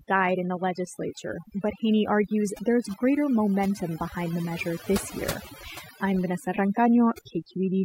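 Throughout, overdone noise removal has cut frequency bands near the noise floor, taking quiet speech detail too, leaving near-silent gaps with twinkling specks.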